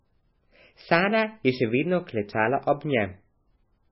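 MP3 compression runs throughout this speech, with nothing above about 5.6 kHz. The treble loss and heavy watery, swirling smear are likely from an encoder starved of bits, which fits a bitrate around 15 kbps, zeroing weak frequency lines that flicker between frames.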